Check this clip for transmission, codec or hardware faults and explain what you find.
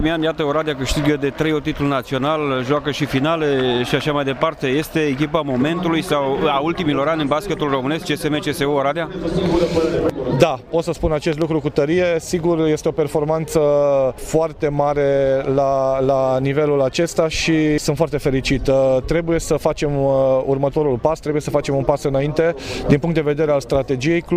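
One hardware fault: a loud pop at 11.33 to 11.44 s. Two sharp pops in quick succession stand out about 10 dB above the surrounding sound, which carries on underneath. The likely cause is a sudden voltage step or pulse, such as a plug, switch, static discharge or driver glitch, entering the signal path.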